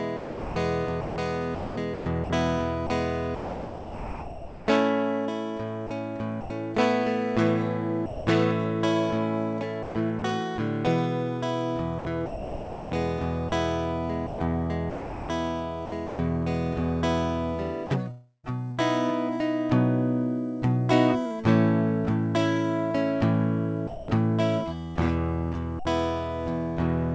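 A music recording, carried over a call link with nothing above 8 kHz. Sound chopped by the voice detector occurs at 0.17–4.67 s, 5.87–6.50 s, 9.83–10.22 s, 11.99–16.19 s and 17.87–18.80 s. In these stretches the music breaks up. Pieces vanish under a steady synthetic hiss, then return. The longest stretches lose about 2.3 s and 1.4 s in total. The cause is likely a sender-side voice detector switching on and off repeatedly. Music confuses it. Each off moment sends comfort noise instead of the real sound.

Sound dropped by the voice detector occurs at 8.06–8.27 s, 23.87–24.08 s and 25.79–25.85 s. The first two gaps last 210 ms each, the third 60 ms. Each time, the music stops and is replaced by flat noise. It resumes once the detector fires again. The likely cause is the detector taking the music for background and halting transmission.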